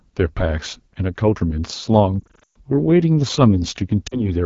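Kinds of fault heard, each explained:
AMR wideband (HD Voice) codec: The whole clip runs through AMR-WB at 8.85 kbit/s, one of its two lowest rates, and you can plainly hear it. The codec rebuilds the speech below 6.4 kHz from a pulse-driven model of the vocal tract and just pads the top band up to 7 kHz with shaped noise. At this low rate the model is starved of bits, so the speech comes out rough and raspy all the way through.
Lost AMR speech frames: Twice the decoder had to cover for frames that didn't arrive intact, reusing the last good pitch and vocal tract settings at falling gain. Between 2.20 and 2.56 s about 240 ms of speech is missing, scattered over that span, with the longest gap around 120 ms. There the sound drops to near silence within two frames, then comes back weak and rough. Around 4.07 to 4.28 s a shorter 40 ms loss, which fits two frames, gives a brief drop toward near silence.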